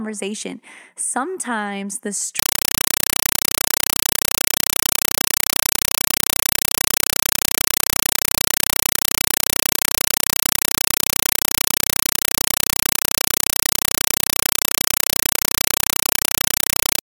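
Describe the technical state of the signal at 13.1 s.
At 13.1 s you're hearing a compressed stream played as audio: from 2.39 s onward, undecoded AC-3-style data bursts as loud chattering static, about 5.3 ms bursts repeating 31 times a second.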